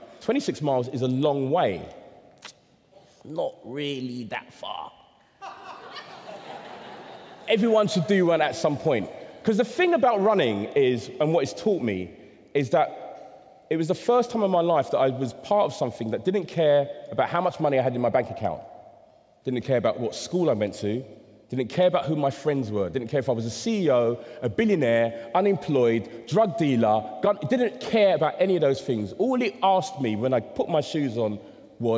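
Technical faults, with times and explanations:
No technical faults can be heard in this audio. Nothing in it calls for a time or an explanation.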